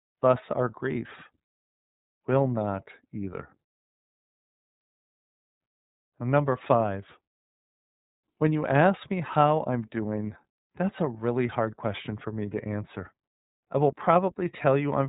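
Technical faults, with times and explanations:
Throughout, iLBC codec. Nothing above 4 kHz comes through, so the speech sounds narrowband. Each frame's excitation is coded on its own, without leaning on the frame before. This leaves a plainly audible rough, synthetic edge, which fits 30 ms frames at about 13 kbps.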